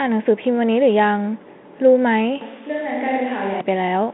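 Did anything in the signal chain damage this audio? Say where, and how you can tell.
Yes. At capture, a switch to a distant microphone likely happened from 2.41 to 3.61 s, after the close microphone's feed dropped. The speech turns suddenly hollow and roomy, thinner in the bass and about 5 dB quieter, with room noise about 25 dB below it, then snaps back.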